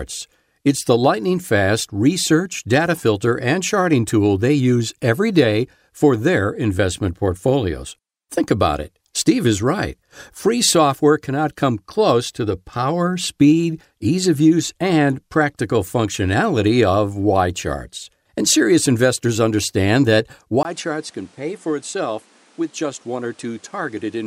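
At 20.63 s, right after "serious investors understand that", a gap of about 20 ms opens, and the speech resumes duller and roughly 10 dB quieter until the end. Nothing reaches above 11.4 kHz, and a new background noise sits around 30 dB below the speech. This is likely an input switched to a poorer device. A filter change alone would not also bring a level drop, a different noise floor and a brief dropout at the same instant.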